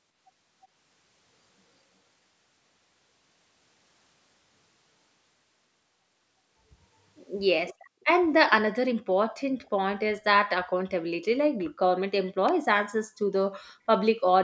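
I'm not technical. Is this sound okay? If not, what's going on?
No, not entirely. There are two kinds of problems.

The first is an echo leak. From 7.67 to 8.05 s you can hear a faint second copy of the voice trailing about a third of a second behind, and there's a much fainter, very brief scrap of it again at 9.63 to 9.7 s. The likely cause is that someone on the other end had the call on a loudspeaker, and their echo cancelling didn't catch everything, so a bit of the voice got sent back down the line.

The second is an electrical switching spike at 12.49 s. It's a sharp snap sitting on top of the sound, over almost instantly. That's likely a nearby switch, motor or static discharge creating a tiny electrical arc that the audio line picked up as a click.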